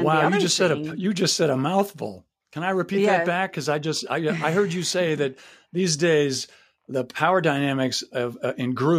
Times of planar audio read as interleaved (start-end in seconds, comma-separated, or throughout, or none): none